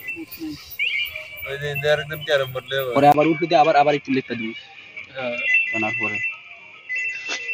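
At 3.12 s there's a brief gap, about 20 ms, and from there to the end the sound goes duller and a bit boxy, with nothing above 6.8 kHz. That's most likely the input switched to a poorer device partway through, something narrower-band taking over the recording. Loudness stays about the same across the change, but a faint new background noise comes in, sitting well below the signal.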